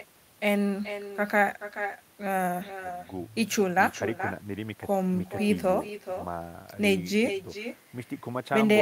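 A speech clip with echo with no canceller throughout. Every phrase returns a fraction of a second later, roughly 400 ms behind, as a quieter copy about 11 dB below the direct speech, thinner in tone. That fits the far end playing the call on a loudspeaker into its own open microphone, with nothing subtracting it before it travels back. Unlike room reverberation, which smears into a diffuse tail, this is a distinct, delayed repeat.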